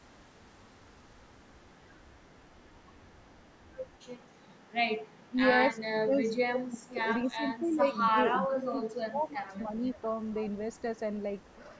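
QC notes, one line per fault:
0.02–5.3 s, 7.69–8.1 s, 9.67–9.98 s, 10.5–10.99 s, 11.38–11.78 s: echo leak. A delayed copy of the speech trails the original by about 273 ms. It's very faint across the first five seconds and in the last two scraps, roughly 35 dB down. It's clearly louder at 7.69 s (about 20 dB down) and fainter at 9.67 s. The likely cause is a speakerphone on the far end whose echo canceller didn't fully subtract what its mic picked up, so the leftover got sent back.
5.29–5.39 s and 5.73–10.07 s: speech suppressed in double talk. The first is a quick dip of roughly 15 dB lasting around a tenth of a second. In the longer stretch the level keeps ducking, by as much as roughly 25 dB, for about 3 s in total. This is likely the echo canceller hearing both sides at once, failing to tell the local talker from loudspeaker echo and turning everything down while the other side speaks.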